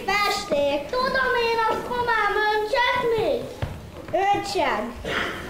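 No faults can be heard anywhere in the clip.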